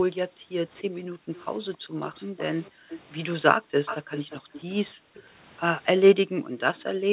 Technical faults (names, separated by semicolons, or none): background gated by the echo canceller; echo leak